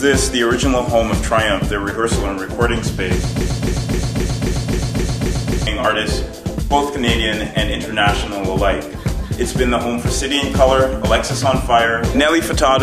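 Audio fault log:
3.41 to 5.67 s, broken-record loop: a 0.26 s piece of sound plays back to back 9 times, like a needle stuck in a groove. Likely the player, encoder or stream stalled and kept resending its last chunk, so whatever belonged there is lost.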